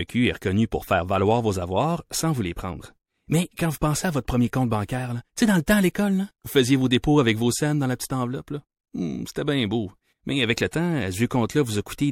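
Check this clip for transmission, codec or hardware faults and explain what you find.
Pre-echo is present, at 4.87 s (after "à votre premier compte", just before "tu sais dans le"), 5.66 s (after "tu sais dans le"), 5.94 s (just before "vous faisiez vos"), 7.02 s and 10.72 s. Each time, a brief hiss of 10 to 17 ms, about 14 to 20 dB above the surrounding quiet, runs ahead of a sharp attack and softens it. The codec shares quantisation noise across a whole transform block, which fits a fixed block of about 26 ms that never switches to shorter ones. The noise meant for the loud onset therefore leaks into the silence before it.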